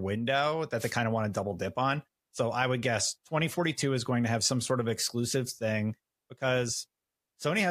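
Right near the start, from about 0.78 to 0.93 s, there's a wireless microphone noise hit: a quick swish of static lasting roughly 150 ms that washes over the speech. The FM radio link between the mic pack and the receiver dipped because reflected copies of the signal arrived out of step and partly cancelled. With the carrier weakened, the receiver's own hiss came up through the audio, and that's the brief static burst you hear.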